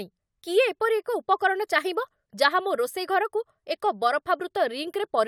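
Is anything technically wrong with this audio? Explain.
No, nothing technically wrong stood out on listening to this speech recording.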